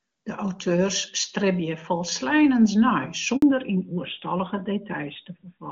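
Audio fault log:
3.36–3.42 s handover gap: right after "auteurs stribje folsleinens nei" the speech fades out quickly into 60 ms of silence, where the network switch delivered no frames. Unlike a click-edged packet dropout, it dies away cleanly.
3.42 s to end fallback to narrowband: the clear wideband sound of AMR-WB at 23.85 kbit/s gives way to AMR-NB at 12.2 kbit/s, and nothing above 4 kHz remains. The switch is abrupt, not a gradual dulling.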